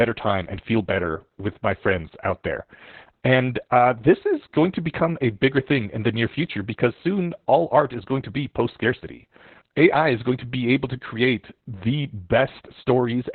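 From start to finish the speech carries Opus voice compression at a heavy setting. The encoder is running in its SILK linear-prediction mode at 8 kbps, squeezed to narrowband, so nothing survives above about 4.3 kHz. That missing top end leaves the speech muffled and telephone-like, and the coarsely coded excitation adds a hoarse, faintly robotic grain to every syllable. The damage is steady across the whole clip rather than coming and going.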